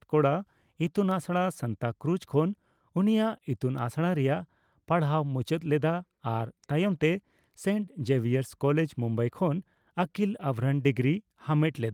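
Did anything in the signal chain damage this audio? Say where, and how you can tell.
No, no damage is audible.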